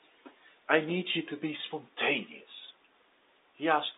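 No technical faults are audible.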